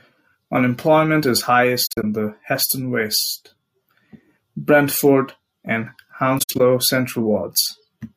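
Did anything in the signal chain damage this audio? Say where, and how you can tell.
Yes. The damage happened at the codec stage: AAC frame loss with muting, twice in this speech. Between 1.86 and 2.04 s, 106.7 ms of audio is missing in pieces spread over 170.7 ms, the longest gap about 40 ms. Between 6.38 and 6.60 s, 128 ms is missing across 213.3 ms, the longest gap about 70 ms. The decoder zeroed the spectrum of each lost frame, and the overlapping windows fade the sound out and back in, leaving soft-edged holes.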